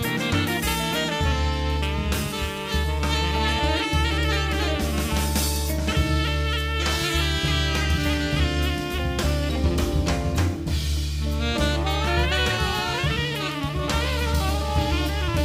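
No technical faults can be heard anywhere in the audio.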